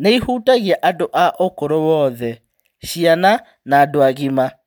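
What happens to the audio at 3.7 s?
Nothing goes wrong at 3.7 s; the audio at that point is intact, with no dropout, click, distortion or other fault to be heard.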